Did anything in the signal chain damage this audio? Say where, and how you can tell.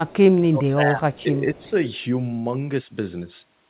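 Yes. From 0.04 to 1.71 s the speech dips by as much as about 20 dB, over roughly one and a half seconds in total. This is speech suppressed in double talk, likely from call processing: the echo canceller could not separate near-end speech from loudspeaker echo and attenuated both.

Faint repeats of the speech, about 30 dB below it and 230 ms late, appear at 0.09–0.16 s, 1.13–1.23 s and 1.55–1.70 s. That is echo leak, likely from the far end's canceller passing residual loudspeaker pickup back down the line.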